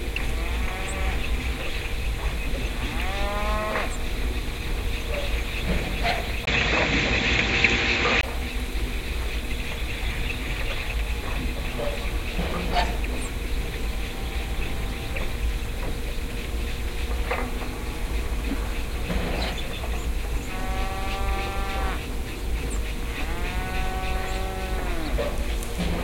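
At 6.45 s the sound drops out for about 20 ms, then returns duller and boxier, with nothing above 7.6 kHz, a level shift of around 5 dB and a new, faint background noise well below the signal. At 8.23 s it clears again. This is likely an input switched to a poorer device. A simple filter or codec bandwidth drop would not bring the gap, the level change or the new noise floor along with the narrower band.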